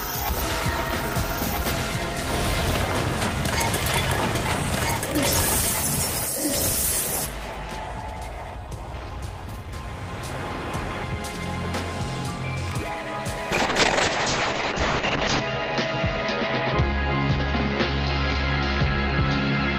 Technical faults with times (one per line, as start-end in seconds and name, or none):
0.00-7.26 doubled audio track
13.52-19.78 call bitrate drop